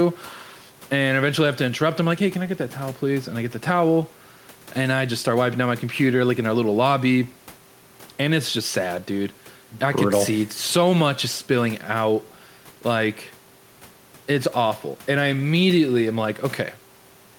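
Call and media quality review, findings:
No findings for the call and media quality review: nothing in the audio needs attention.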